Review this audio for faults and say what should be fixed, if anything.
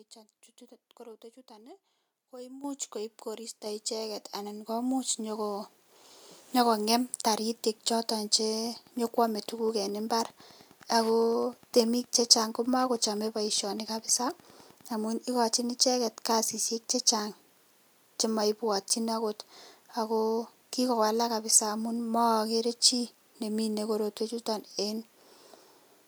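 The microphone volume stepped up three times: at 2.64 s, just before "koib koristo icheket anan", by about 10 dB; at 3.66 s, between "koib koristo" and "icheket anan komuch", by about 5 dB; and at 4.68 s, by about 4 dB. The software's automatic gain raised the input each time. Speech and background jump together. To prevent it, disable automatic microphone adjustment and set the input level once.

Wi-Fi interference runs from 8.65 s to 14.95 s, ending just before "amun ikachi icheket kasisiek". It is a steady ticking, about ten per second, matching a 102.4 ms beacon. The audio circuit rectifies a nearby radio's bursts. It sits roughly 30 dB below the speech. To prevent it, move the Wi-Fi device away from the microphone and its cabling.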